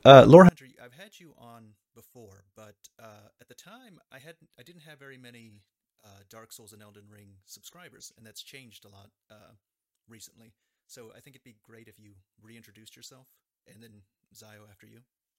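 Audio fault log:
0.49–15.39 s, one channel inverted: the speech falls by about 35 dB to a faint residue, likely because one channel's reversed polarity cancels the shared content.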